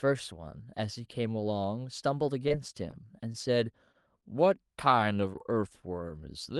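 Repeated packet loss gives this speech recording a choppy, robotic stretch from 2.43 to 2.94 s. Over that half second, four separate gaps open, the longest about 20 ms, and each is papered over by extending the sound that came just before it. About a tenth of the span is concealment rather than real audio. Because the holes come in quick succession, small pieces of the speech are lost. A short stall from a late packet follows at 3.32 to 3.36 s, and another at 3.92 to 3.96 s. In both cases the jitter buffer ran dry while waiting for audio that was delayed, so the receiver held the current sound for roughly 17 ms and 21 ms respectively before resuming exactly where it had paused. Nothing is dropped, but the held sound lingers a moment too long and carries a faint buzz or dip. A short concealed packet loss at 4.20 to 4.24 s removes about 20 ms of audio outright. The decoder bridges it with about 15 ms of continuation built from the preceding sound and then blends back into the real signal, leaving a brief smear or wobble. 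Through all of this the call codec's top end stops near 12 kHz, which points to an Opus-style super-wideband call path.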